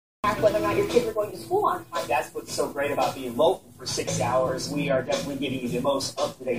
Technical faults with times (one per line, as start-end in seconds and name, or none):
4.48 lost LE Audio frames